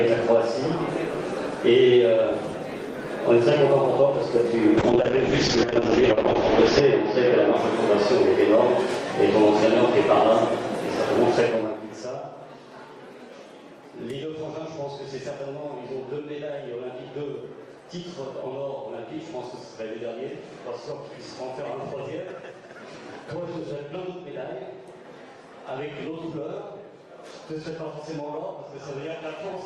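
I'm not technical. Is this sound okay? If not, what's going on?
No. From 4.79 to 7.61 s there is a call bitrate drop: the connection seemed to weaken, so the system squeezed the sound into far fewer bits. For about two seconds in the middle it turns muffled and rough, losing its brightness, then clears.

From 11.36 to 11.81 s there is zipper noise: the volume is turned down noticeably in small jumps, about thirty a second, instead of a smooth glide. Each jump makes a tiny click, so you hear a brief ticking or zipping as the sound gets quieter.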